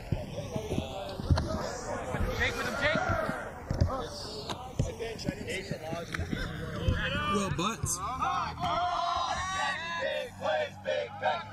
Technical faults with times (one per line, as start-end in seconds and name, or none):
0.00-11.53 channels drifting apart
3.28-7.61 call bitrate drop